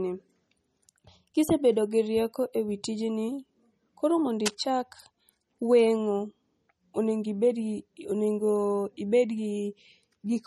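Throughout the speech, nothing appears above 13.1 kHz, with a hard ceiling across the spectrogram and smeared, watery detail beneath it. This is low-bitrate audio saved at a high bitrate: a likely 32 kbit/s MP3 re-encoded at a much higher rate, which keeps the first encoder's losses.

From 4.45 to 4.64 s, just after "koro mondo", cable scratch noise rasps over the speech at roughly 10 dB below it. It is likely a worn contact being moved, with rapidly changing resistance. The waveform shows dense, jagged bursts, and the spectrogram shows broadband vertical streaks.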